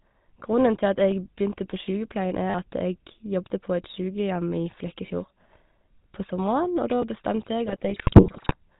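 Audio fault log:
Throughout: GSM full-rate codec. The speech has a plainly audible buzzy, gravelly roughness and a dull, closed-in top with nothing above 4 kHz. The sound fits a 13 kbps GSM full-rate link. This codec rebuilds the voice from a vocal-tract filter driven by a regularly spaced pulse train that keeps only every third excitation sample. That coarse excitation is what gives the harsh, grainy texture across the whole clip.
7.66 to 8.55 s: GSM bit errors. Near the end the speech breaks up into squawks, pops and gargling for just under a second. Corrupted bits reached the decoder at an error rate of about 2.6 percent, which fits several dozen damaged frames. Where the filter, pitch or gain values were hit, the spectrum was bent out of shape or the level jumped for that frame, which produces the sudden ugly bursts.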